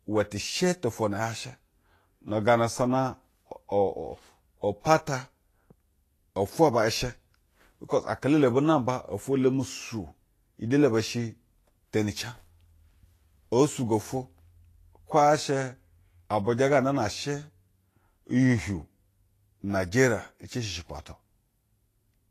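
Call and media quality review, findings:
Speech path, full clip: likely lossy Vorbis compression at low quality, fitting a bitrate near 33 kbps. Band cut above 14.2 kHz. Treble residue quantised too coarsely, fine detail replaced by noise of similar energy. Plainly audible: hissy, grainy sound, roughened tone, smeared consonant onsets.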